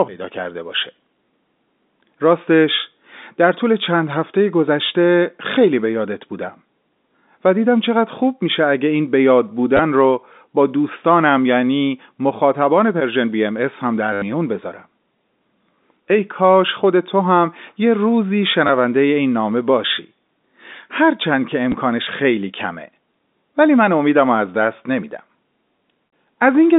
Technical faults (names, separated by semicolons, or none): packet loss with last packet repeated